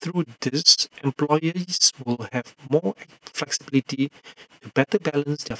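Overlap-add ripple runs through the whole speech clip: frames rejoined without constant-gain overlap make the level dip by about 60 dB roughly seven times a second, a choppy fast flutter.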